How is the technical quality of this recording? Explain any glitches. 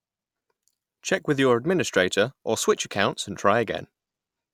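Nothing stood out as a technical problem on listening to this recording, so there are no glitches to explain.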